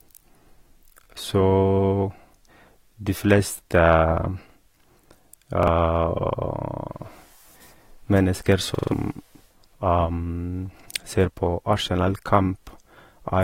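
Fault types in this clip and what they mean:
Repeated buffer: New audio arrived late, so the last chunk of speech played again with hard joins. A 43 ms piece, which fits a 2048-sample buffer, repeats once at 5.63 s. At 8.75 s it stutters several times, losing about 150 ms.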